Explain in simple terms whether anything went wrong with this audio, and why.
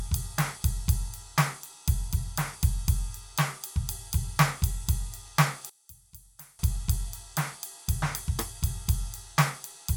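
From 5.70 to 6.59 s the music suddenly drops sharply in volume, with the centre nearly gone. The likely cause is one channel inverted: one stereo side is flipped in polarity, so shared sound cancels when the two are combined.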